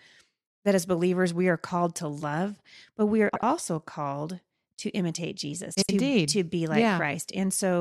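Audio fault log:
3.28–3.43 s and 5.74–5.90 s: frames out of order, two adjacent 70 ms blocks play swapped, giving a garbled flutter and no lost time.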